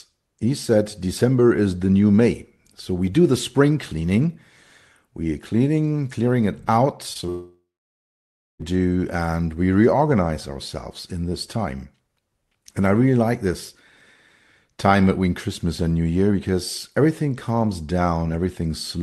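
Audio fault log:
7.13–7.17, 7.21–7.24 and 7.26–7.30 s, short concealed packet loss: just after "cleaning clearing it out", three brief smeared wobbles where lost audio was extrapolated; spectrogram shows blurred, stretched harmonics.
7.30–8.74 s, long network dropout: a buzz decays into roughly a second of silence, likely from audio never arriving; waveform flattens until "and we reorganize ourselves".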